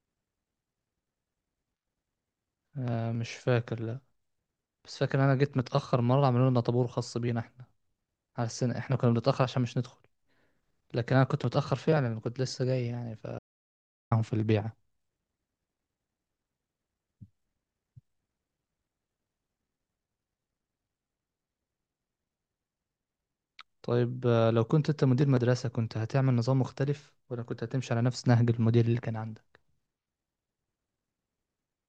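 At 13.39 s the speech drops out to silence for about 0.73 s, until 14.11 s. This audio dropout to silence leaves plain silence with no room tone, unlike a noise gate's residual hiss, likely from a lost input link while recording continued.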